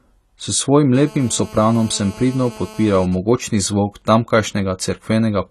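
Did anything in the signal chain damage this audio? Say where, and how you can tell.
Yes. Throughout the 5 s of speech, the audio sounds dull and smeared, with a fizzy, warbling texture on sibilants and nothing above 14 kHz. This is likely AAC compression at a low bitrate, around 32 kbps, in the codec stage. A simple low-pass filter would not add the warbling.

From 0.94 to 3.06 s there is GSM phone buzz, picked up in the analogue wiring. A hard, raspy 217 Hz tone rich in harmonics sits about 21 dB below the speech, steady and unrelated to it. This is a phone in a call, with its radio pulses rectified by the circuit. Mains hum would sit at 50 or 60 Hz and sound smoother.

From 3.12 to 4.62 s, GSM signalling bursts replace the steady buzz. They are even ticks with a longer 217 Hz buzz twice a second, much quieter, roughly 30 dB down. The phone is still in the call but its user has gone silent, so it transmits only in short groups and the buzz becomes intermittent.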